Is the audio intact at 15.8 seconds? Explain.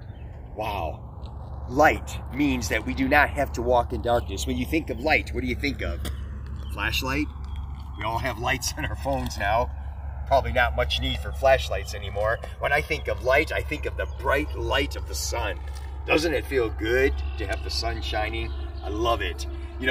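No. The channels drifting apart fault runs throughout the clip, including 15.8 seconds. The two sides run on clocks that disagree by around 200 ppm, so their offset grows toward a few milliseconds. In mono, the comb notches sweep slowly, heard as a gradual flanging.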